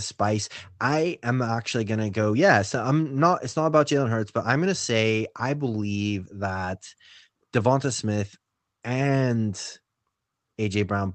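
No technical faults can be heard in the speech, which comes through an ordinary call codec path with its high end stopping around 8 kHz.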